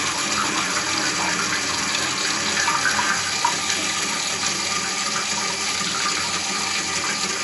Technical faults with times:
0.00-7.43 MP3 compression

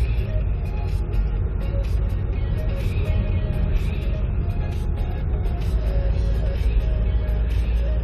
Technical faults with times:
6.51-6.55 compressed frames skipped

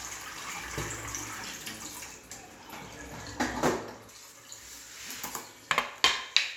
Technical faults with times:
4.09-6.57 pre-emphasis left on

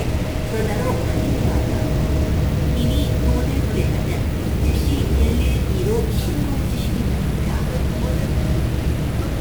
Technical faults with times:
0.00-9.40 stuck bit

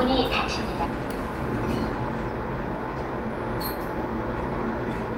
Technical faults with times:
2.86-3.38 jitter buffer speed-up

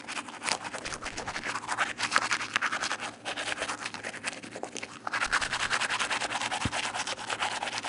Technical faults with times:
0.00-7.89 4-bit ADPCM compression
0.87-1.40 loose connector crackle
5.26-5.73 loose connector crackle

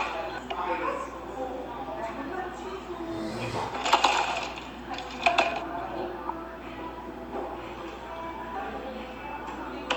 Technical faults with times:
none

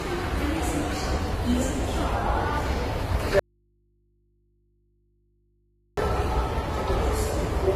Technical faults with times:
0.00-7.76 transcoding between lossy codecs
3.39-5.97 audio dropout to a faint residue

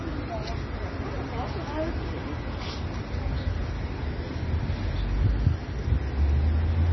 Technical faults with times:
0.00-6.92 MP3 compression

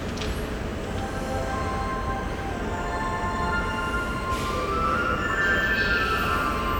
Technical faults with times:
none

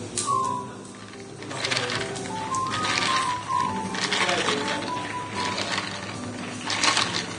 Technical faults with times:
0.00-7.39 Vorbis compression

